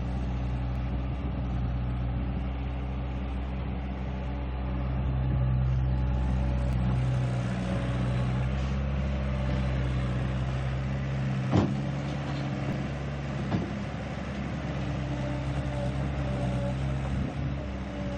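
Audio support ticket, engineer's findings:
Overlap between stream segments: tiny skips at 0.76, 6.73 and 12.73 s, spaced 6 s apart to match segment boundaries. Segment timestamps overlap. Player trims the overlap from sound that wasn't duplicated. A few milliseconds lost each time, waveform jumps.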